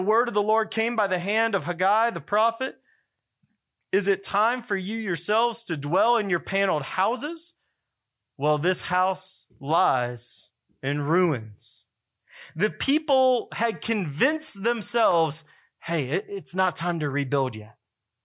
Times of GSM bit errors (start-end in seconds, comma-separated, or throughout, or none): none